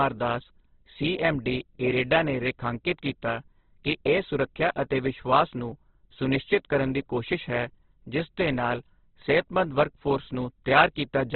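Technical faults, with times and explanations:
Throughout, Opus compression: the speech is narrow and dull, with nothing above 4.4 kHz, and tones sound rough, grainy and noisy rather than swirly. This is likely Opus music (CELT) mode starved of bits and filling bands with noise, which fits roughly 12 kbps.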